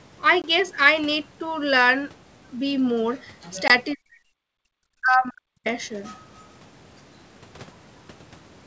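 At 0.42 to 0.48 s and again at 3.68 to 3.71 s, packet loss on an ADPCM call cuts a silent gap of about 20 ms, roughly one packet, into the speech. On a waveform it shows as a flat-line hole with abrupt edges. When the sound returns, the decoder's predictor and step size have drifted from the sender's, so the speech is briefly slightly distorted before it settles.

From 3.94 to 4.19 s, 4.4 to 4.8 s and 5.01 to 5.66 s, the speech dips sharply, by about 40 dB at its deepest. This is likely speech suppressed in double talk, where an echo canceller mistakes the talker for loudspeaker echo. On a spectrogram the energy across the wideband G.722 range up to 8 kHz fades out.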